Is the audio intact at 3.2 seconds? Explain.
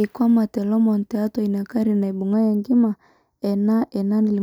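No. From 2.33 s to 4.34 s, just after "lomon tiatwa inagari", channel delay (comb filtering) sets in: one channel lags by roughly a fifth of a millisecond, and the mono sum cancels at evenly spaced frequencies, the first near 3 kHz. The speech sounds hollow and phasey, and a spectrogram shows fixed dark horizontal notch bands.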